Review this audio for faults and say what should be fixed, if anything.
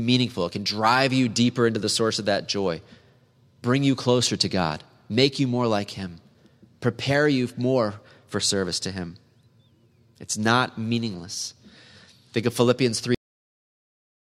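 The speech has a cut-off end at 13.15 s. It stops mid-sound and drops straight to digital silence for the rest of the clip, with no decay, because the final buffers were never written out. On a waveform the signal ends abruptly in a vertical edge followed by a flat line, and a spectrogram shows every frequency band going dark at the same instant. To prevent it, flush and close the recording or encoding pipeline only after all pending buffers have been written.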